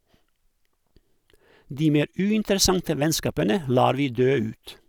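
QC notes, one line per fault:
No faults heard.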